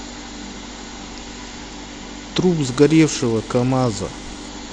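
From 2.63 s to 4.48 s the speech turns dull and muffled, the top end falling away while a gritty, granular noise rises under it, then clears again. This is a Bluetooth SBC bit pool drop: the link came under strain and the encoder cut its bit budget to keep audio moving. The sound points to a fall from a bit pool near 28 to about 11, roughly 90 kbps, which starves the upper sub-bands and coarsely quantises the rest.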